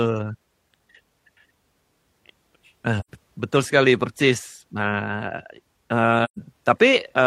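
AAC frame loss with muting: the decoder lost AAC frames and zeroed their spectrum. At 3.00 to 3.08 s, just before "betul sekali persis", and at 6.24 to 6.38 s, the speech fades into soft-edged silences of about 85 and 128 ms, matching two and three frames.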